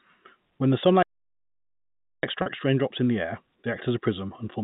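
At 1.03 s the speech stops dead in mid-flow, and the line goes completely silent until 2.23 s, a gap of about 1.2 s, before the talker carries on. That long, clean hole is the mark of a playback stall. The likely cause is the player running short of buffered data, or its output thread being held up, so nothing reached the speaker until it recovered.

Shortly afterwards, from 2.42 to 2.46 s, the sound briefly turns held and slightly buzzy for about 40 ms before "raindrops in the air". This is packet loss with pitch repetition: a short stretch of the stream never arrived, and the receiver filled it by looping the last pitch cycle it had. At this length the repeated cycle comes through as a brief, steady drone instead of silence. A 40 ms gap fits two lost 20 ms packets. The band-limited telephone character of the G.711 path runs through the whole clip.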